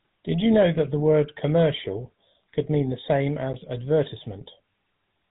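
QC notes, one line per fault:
Throughout, GSM full-rate codec. The speech has a buzzy, gravelly roughness that never lets up. The codec keeps a model of the vocal tract and drives it with a coarse pulse pattern, discarding most of the excitation detail. That thinned excitation is what turns the voice grainy. Nothing passes above 3.8 kHz, so sibilants sound dull and boxed in. The damage is plainly audible and fits a 13 kbps stream.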